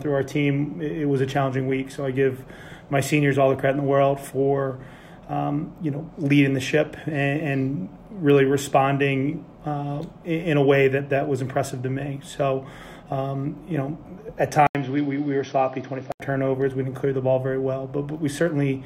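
From 14.67 to 16.20 s the audio suddenly turns dull and boxy. An 80 ms silence opens the change. Nothing reaches above 6 kHz during the stretch. The level drops by roughly 5 dB, and a new background noise sits about 30 dB under the signal. At 16.20 s the full band returns. The likely cause is an input switched to a poorer device, such as another microphone or a headset's call profile.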